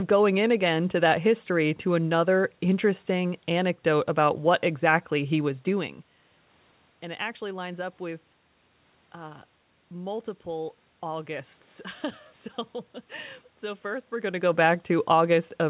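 No technical faults can be heard in this speech recording.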